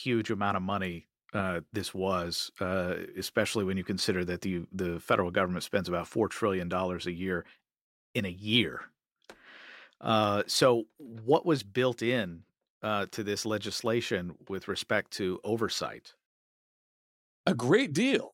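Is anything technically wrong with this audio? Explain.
No, nothing in this speech recording points to a technical fault.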